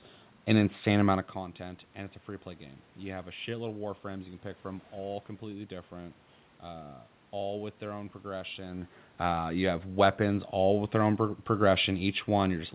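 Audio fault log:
Nothing to log here; the speech comes over the call line with its telephone-style band topping out at 4 kHz, some background sound from the room, and the talker drifting nearer or farther from the mic around 1 s and again around 8.5 s.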